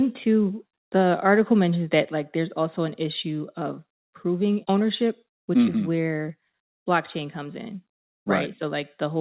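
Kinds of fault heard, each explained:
Microphone overload: Between 1.28 and 1.33 s the loudest peaks are flattened at the converter's limit, giving a short, harsh crackle on top of the syllable. The tops of the waveform are squared off rather than rounded, and a small fraction of samples, under one percent, were pinned at the converter's limit. The likely cause is an input gain set high enough that the converter ran out of headroom on those peaks.
Microphone volume stepped down: At about 2.04 s, under a second after the distorted burst, the whole signal drops by about 3 dB in a single step. Speech and background fall together, so the change sounds like a level switch rather than the talker moving away. This is likely the call software reacting to the overload by lowering the device's input volume once, instead of ramping it, while the narrow telephone-band sound, with nothing above 4 kHz, carries on unchanged.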